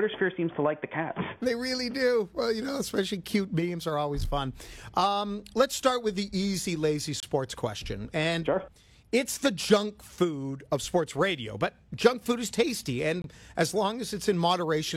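At 7.20 s and again at 13.22 s the sound drops out for about 26 ms and 23 ms, a gap between stream segments. The timestamps of consecutive segments don't quite meet, so the player pads the hole with silence rather than losing any audio. Spaced 6 s apart, the gaps fit 6-second segments. Each is a brief hard-edged hole, seen as a flat silent notch in the waveform and a thin empty vertical stripe across the spectrogram.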